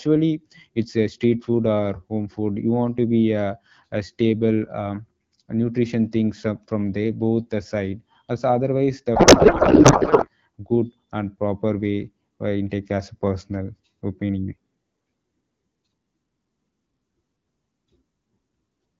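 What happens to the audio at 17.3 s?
Nothing goes wrong at 17.3 s: the speech there stays intact, carried by the AMR wideband (HD Voice) codec at 12.65 kbit/s with only light coding damage and no break, dropout or distortion.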